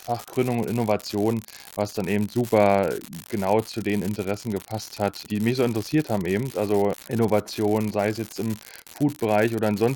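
Speech with an unreliable data bit running the whole way through: one marginal line flips at random, dropping same-size spikes of about −17 dBFS that fizz even in the pauses.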